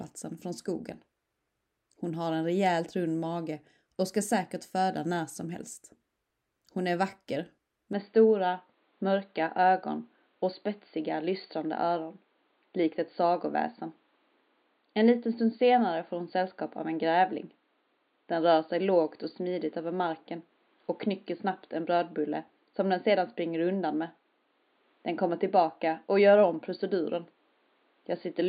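At 7.93 s the sound suddenly goes duller and boxier, with nothing above about 4.6 kHz from there to the end. There's no gap at the change, the level barely moves, and a faint new noise floor sits well below. It's likely the input switched to a poorer device.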